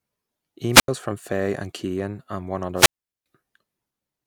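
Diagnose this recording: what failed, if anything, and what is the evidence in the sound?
Hiss rises, then near silence at 0.72–0.88 s and 2.75–3.26 s after "and one". This is wireless microphone squelch dropout: the radio link fades and receiver squelch mutes it.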